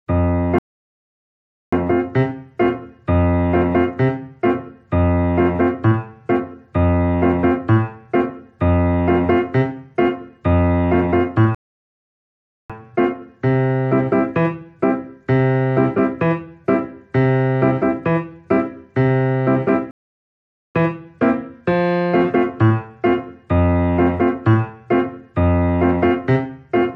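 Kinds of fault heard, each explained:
Playback stall: The player most likely ran short of buffered data, or its thread was held up, so nothing reached the output until it caught up again. In this clip that shows as three dead gaps where the sound cuts off abruptly in mid-flow: about 1.1 s from 0.59 s, another of about 1.1 s from 11.55 s, and a shorter one of about 0.8 s from 19.91 s, each ending when the sound returns.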